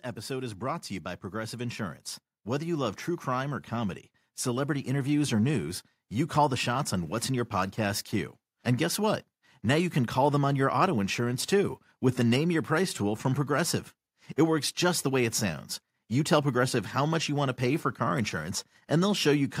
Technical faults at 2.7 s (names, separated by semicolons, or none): automatic gain rising